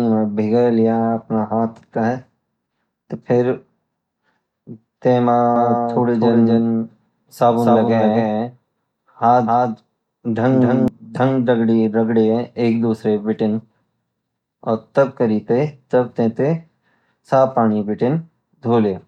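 A speech recording with a doubled audio track from 5.56 to 10.88 s. A second full-band copy trails the original by roughly 300 ms, about 5 dB quieter. It has no reverb tail and cuts in and out abruptly. The likely cause is a slower duplicate capture path.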